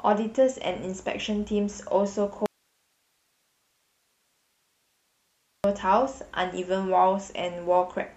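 At 2.46 s the speech cuts out abruptly and stays gone until 5.64 s, about 3.2 s, leaving only hiss roughly 45 dB below the signal. This audio dropout to a faint residue likely comes from the signal being lost while the downstream path stayed live.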